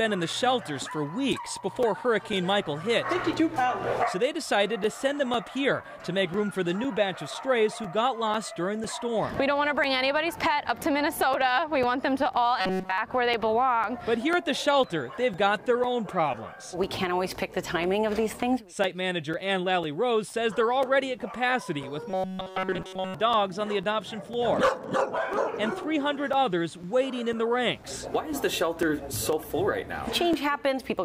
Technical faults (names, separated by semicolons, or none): periodic USB or driver dropouts; robotic sound from repeated short buffers